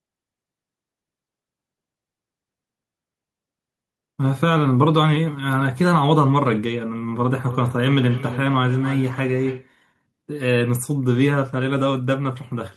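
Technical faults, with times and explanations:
7.34–9.74 s, feedback echo between two devices: the speech comes back as a delayed copy roughly every 300 ms, peaking at about 15 dB below the direct sound and sounding thinner and more ringing. A second device in the room replays what this microphone sent, and the microphone picks it up again. Its echo canceller only removes its own playback. A spectrogram shows fainter, evenly spaced ghost copies of each syllable's harmonics. The waveform shows small repeated envelopes trailing each burst.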